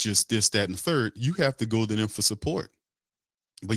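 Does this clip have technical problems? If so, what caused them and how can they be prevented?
No, nothing in this speech recording points to a technical fault, so there is nothing to trace or prevent.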